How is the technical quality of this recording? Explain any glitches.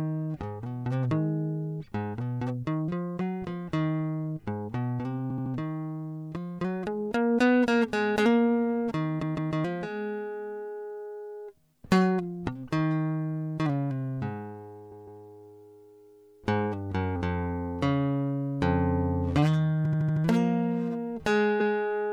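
The music has five stutters from repeated frames, at 5.29, 9.21, 14.91, 19.84 and 21.59 s. Each time, a block of compressed audio 78 or 157 ms long plays again, up to five extra times. This lengthens the track, whereas a dropout removes audio.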